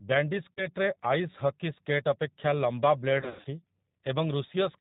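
Throughout, the speech carries G.729 codec damage: an 8 kbit/s coder rebuilds each 10 ms frame from a vocal tract filter, pitch predictor and a few pulses, so nothing above 4 kHz survives and the voice sounds plainly rough and synthetic. Packet loss concealed by the speech codec appears at 0.53–0.66 s, where about 40 ms of audio went missing, and again at 3.21–3.47 s, where about 180 ms was lost in patches across 240 ms, with the longest gap 100 ms. The decoder extends its last pitch and filter at falling gain, producing a buzzy tone or coloured noise that fades, and the voice stays weak briefly after each gap.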